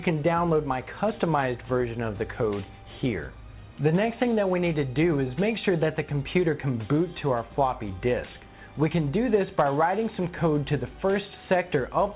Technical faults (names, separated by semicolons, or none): none